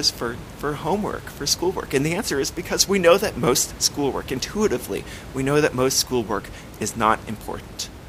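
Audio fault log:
No faults are present in this speech clip. The room's background noise sits about 16 dB below the speech and belongs to the recording itself.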